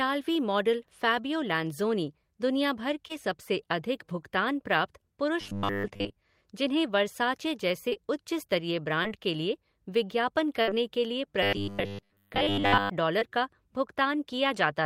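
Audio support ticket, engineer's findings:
Short concealed packet loss, five spots: 3.07 s, just before "सबसे अधिक भुगतान प्राप्त"; 7.89 s and 7.93 s back to back; 9.03 s, between "उच्च स्तरीय" and "के लिए विज्ञापन"; 13.19 s. Each is a brief smear or wobble from about 20 ms of missing audio, filled by the jitter buffer's concealment. At 9.03 s about 15 ms of extra time is added. Differs from the burst by brevity: there is no audible held tone or fade.

Robotic sound from repeated short buffers: 5.41–6.15 s, between "सबसे अधिक भुगतान प्राप्त" and "जिन्हें वर्साचे", and 11.43–12.90 s. A rigid metallic buzz at 100 Hz follows the speech loosely, with most of the audio replaced by repeats. Likely cause: audio frames arriving late, with the playout repeating a 10 ms block. Differs from packet loss because the buzz is sustained and fixed in pitch, not a single short gap.

Burst of packet loss: 10.62–10.69 s. 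About 60 ms is lost, with 57 ms of it filled by concealment. The last sound is stretched and faded, then speech jumps ahead with the material in between gone. Receiver-side concealment is stretched past its useful length. Differs from the short losses by its length and audible decay, and from the robotic fault by the lack of any periodic buzz.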